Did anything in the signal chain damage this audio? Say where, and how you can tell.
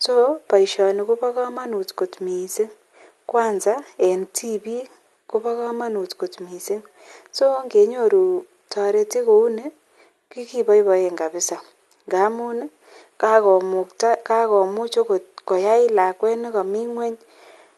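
No, nothing in the chain damaged this speech; it went through an ordinary call path with Opus at 48 kbps, and the top end rolling off around 12 kHz is simply that codec's normal bandwidth setting at work.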